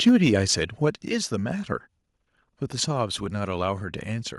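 Speech clip, and right at the start, 0.07 to 0.29 s, the loudest peaks crackle and flatten, pushed about 2 dB past the limit, likely microphone overload clipping a few percent of samples. The level also drops suddenly at 0.09 s by about 2 dB and again at 1.08 s by about 6 dB, likely the microphone volume stepped down by the call software reacting to those hot peaks.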